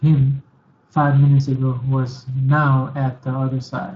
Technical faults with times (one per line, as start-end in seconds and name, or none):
0.00-3.95 Speex codec